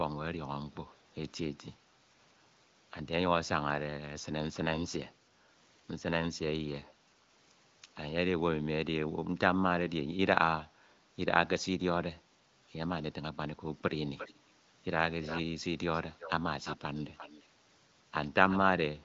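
An echo leak appears at 14.06, 15.22, 15.94, 16.19, 16.64, 17.16 and 18.49 s as short, quieter copies of the speech arriving 0.35 s late, likely from a loudspeaker echo canceller letting residue through. On a spectrogram, weak duplicate harmonic traces trail the originals.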